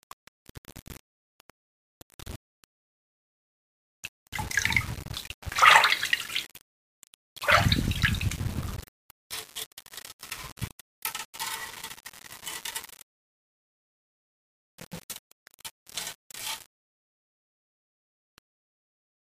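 Throughout the clip the sound carries grainy distortion that tracks the signal, with quiet passages turning gritty and sputtering near silence. This is low bit depth without dither, likely from rounding to about 6 bits, leaving error only about 15 dB below the signal.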